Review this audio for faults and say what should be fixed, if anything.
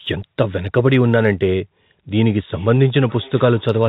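Sample clock jitter, 0.00 to 1.53 s: the converter's clock wavers by around a microsecond, so samples land slightly early or late and the error follows the waveform's slope, adding faint roughness roughly 50 dB down on louder, brighter speech. A stable, well-locked converter clock prevents it.

Feedback echo between two devices, 2.27 to 3.88 s: a second device in the room replays the far end into a microphone whose echo canceller cannot cancel it, so the speech returns roughly every 0.4 s, at most about 24 dB below the original, within the 4 kHz telephone-band call audio. Muting or removing the second device prevents it.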